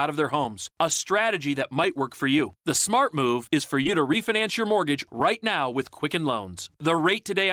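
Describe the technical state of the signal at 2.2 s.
At 2.2 s the speech signal is intact, with no technical fault present at that moment.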